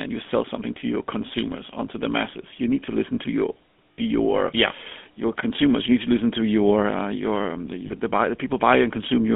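The speech runs through a channel consistent with the GSM full-rate codec, which fits its 13 kbps rate. The codec rebuilds the voice from a vocal-tract model excited by regular pulses that keep only every third excitation sample. The result is a plainly audible buzzy, gravelly roughness across the whole clip, confined to a telephone band of 200 Hz to 3.4 kHz, with nothing above 4 kHz.

On top of this come two bursts of lost GSM frames. In each, damaged frames were replaced by repeating the last good frame's settings, so the sound holds as a rough, metallic ring rather than moving on. The first, from 3.93 to 3.99 s after "to listen to your" and before "your yeah your consumers", covers about 60 ms. The second, starting at 7.86 s between "um the" and "buy the", covers about 40 ms, which points to a couple of frames.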